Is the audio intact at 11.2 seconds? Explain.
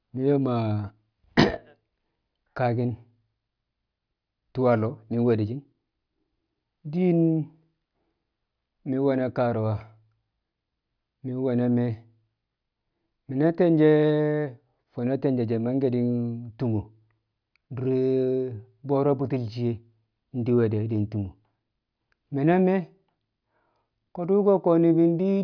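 Yes, the audio at 11.2 seconds is intact, with no dropout, click, distortion or other fault at that moment.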